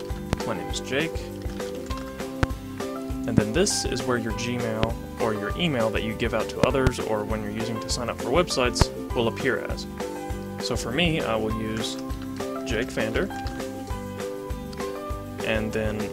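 Loud pops strike the sound at 0.33, 2.43, 3.38, 4.83 and 8.82 s, plus a double pop across 6.64–6.89 s, each towering roughly 25 dB above it, likely from static or a switching glitch. They appear as thin tall waveform spikes and vertical broadband stripes on a spectrogram.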